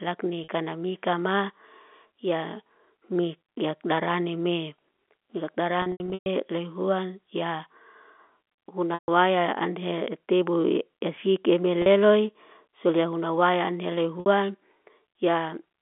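Packet loss with pitch repetition at 0.44–0.48, 5.82–6.26, 8.94–9.08, 11.82–11.86 and 14.20–14.26 s: missing stretches of the speech are bridged by repeating the last pitch period. The 40 and 60 ms gaps sound like a briefly held, buzzy tone. The 140 ms gap and the scattered 440 ms stretch, whose longest run is 120 ms, fade toward silence before the speech cross-fades back.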